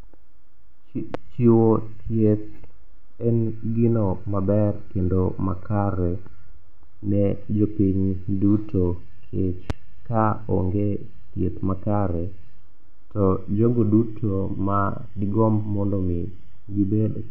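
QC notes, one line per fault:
1.14–1.17 s and 9.70–9.73 s, loud pop: one sharp pop each time, peaking roughly 10 dB above the speech, the second just before "ka onge thieth makare". The speech continues underneath. A brief voltage spike, likely from a connector, switch or static, was added to the signal.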